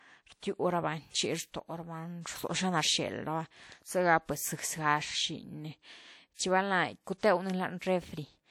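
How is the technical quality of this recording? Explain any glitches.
The speech carries pre-echo in four places, at 6.34, 7.05, 7.18 and 7.79 s: a short hiss runs ahead of a sharp onset, lasting about 47, 20, 54 and 27 ms respectively, and the onset itself sounds smeared. The codec spread quantisation noise meant for the loud attack across its whole block, into the quiet moment beforehand.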